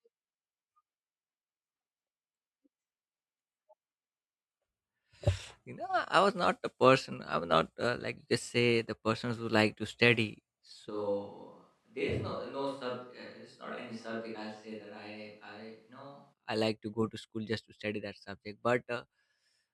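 From 10.91 to 16.32 s the speech abruptly turns hollow and roomy, thinner in the bass, about 10 dB quieter, with background noise rising to roughly 40 dB below the speech. It snaps back just as suddenly. This is likely a switch to a distant microphone.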